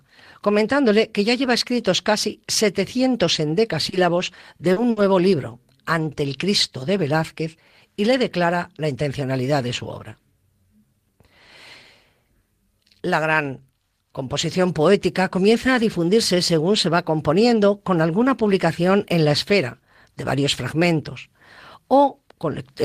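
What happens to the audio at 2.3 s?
Nothing goes wrong at 2.3 s; the speech there plays through intact, with no dropout, click, distortion or other fault.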